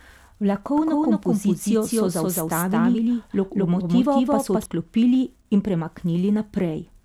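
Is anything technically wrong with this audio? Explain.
Yes. From 0.78 s to 4.66 s the speech is doubled: a second full-band copy trails about a fifth of a second behind, at about the same level. This is likely the same audio captured again through a slower path or two copies left out of step in an edit. Unlike an echo or reverb, the copy arrives once, without decay or room colour, and it switches on and off abruptly.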